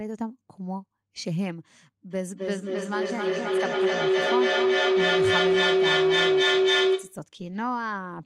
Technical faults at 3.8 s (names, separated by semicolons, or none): feedback howl